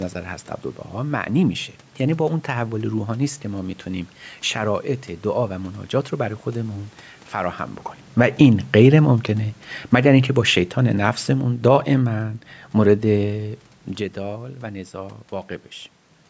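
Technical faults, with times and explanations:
8.05 to 13.37 s, automatic gain falling: the call's automatic gain control judged the input too loud, or the room noise too strong for its starting gain, and lowered its gain by about 7 dB, so the speech and its background sink in level together.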